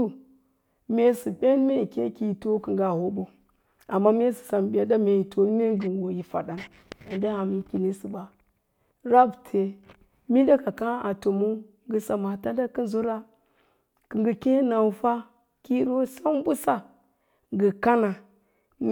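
No technical faults can be heard anywhere in the speech recording. Nothing at any point in it calls for comment.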